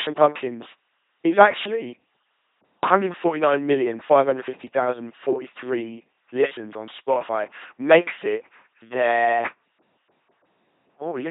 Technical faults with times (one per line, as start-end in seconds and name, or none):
0.00-11.31 LPC-10 vocoder